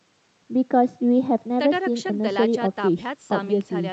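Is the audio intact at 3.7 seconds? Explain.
Yes, the audio at 3.7 seconds is intact, with no audible fault at that moment.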